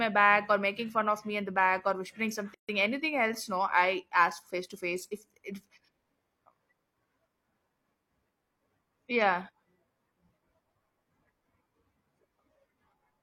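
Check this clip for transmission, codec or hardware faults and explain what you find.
One codec fault. From 2.54 to 2.69 s, after "the back or whispering" and before "anything else", there is a gap at a join of encoded pieces. The speech stops for about 144 ms, with smeared edges, then resumes where it left off. Separately encoded segments were joined with their encoder start delay and final-frame padding left in place.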